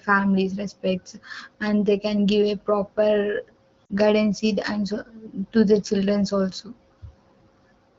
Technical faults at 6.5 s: none

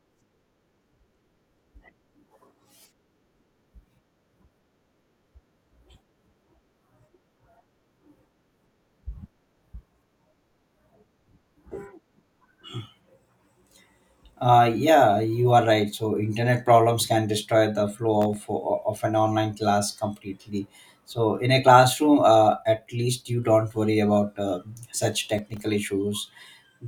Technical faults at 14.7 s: none

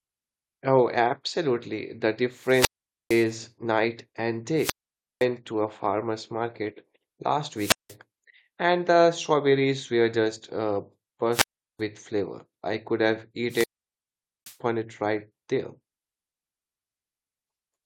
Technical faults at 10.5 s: damaged data in a compressed stream

